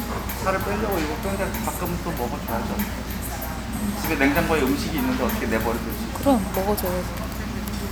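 Nothing in these everyday sounds catches the ear as a technical fault at any point.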